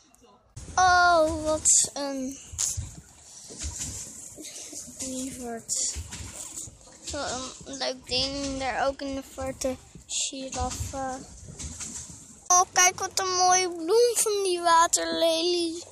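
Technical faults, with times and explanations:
No technical faults detected.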